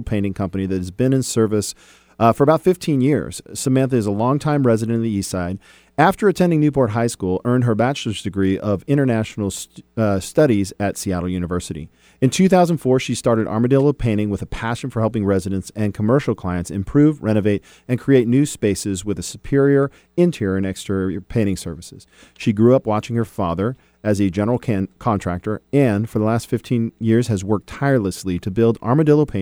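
A speech recording with nothing technically wrong with it.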